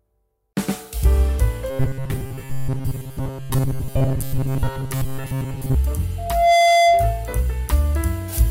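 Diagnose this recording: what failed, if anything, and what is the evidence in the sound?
Robotic sound from repeated short buffers, 1.70 to 5.75 s: a rigid 134 Hz buzz replaces most of the audio, likely a driver underrun looping 7.5 ms blocks.

Loudspeaker feedback squeal, 6.18 to 7.35 s: a 685 Hz tone rises over about 0.4 s to about 5 dB above the sound, with speaker-to-microphone loop gain above one.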